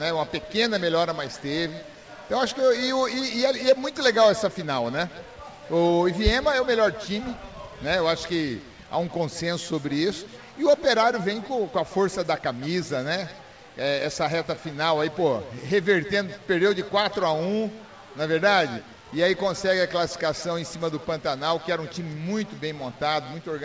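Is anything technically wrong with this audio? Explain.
No, nothing is technically wrong with this audio, and its lack of content above 8 kHz is what a wideband call path normally delivers.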